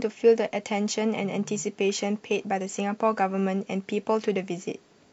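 No technical faults are audible anywhere in the speech.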